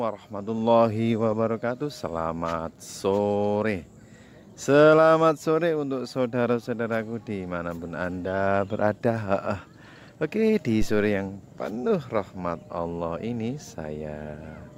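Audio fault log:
10.82–11.17 s, phantom power thump: switching the supply on a live input passes a step through coupling capacitors, producing a deep thump peaking about -16 dBFS and decaying within 80 ms.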